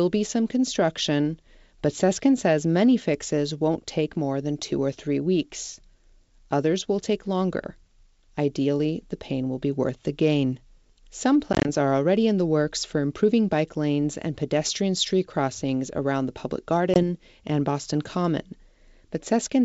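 At 11.53 to 11.69 s, just before "are already in", the speech breaks into packet loss on an ADPCM call: about 80 ms of short silent holes, none longer than 20 ms, scattered across 120 ms. A second loss of 20 ms, about two packets, comes at 16.94 to 17.00 s. Unlike a plain dropout, each return comes back slightly distorted, because the decoder's predictor and step size must resynchronise. This happens within the clean wideband G.722 sound, whose bandwidth fits 64 kbit/s.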